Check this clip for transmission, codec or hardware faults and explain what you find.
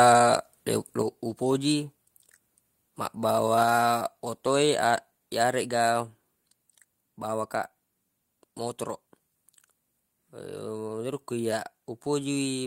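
There's one fault, a microphone volume stepped down at 1.02 s. The speech and the background drop together by about 6 dB in a single step and stay there. The likely cause is call software cutting the mic's input gain after judging the level too hot.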